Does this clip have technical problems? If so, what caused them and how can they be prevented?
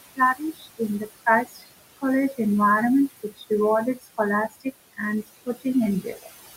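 Yes. Noise suppressor artifacts run throughout: the room noise, sitting about 13 dB under the speech, gets pushed down about 18 dB between phrases, leaving a pumping residue. Gentler suppression settings or a quieter recording space would avoid it.

Speech cut by the noise suppressor happens at 0.35–0.8, 1.45–1.67, 3.23–3.51, 3.96–4.19 and 6.02–6.28 s. The suppressor mistook soft speech for noise and dropped it about 14 to 16 dB for a fifth of a second or less, so those bits sound swallowed. A lower suppression depth or better mic placement would prevent it.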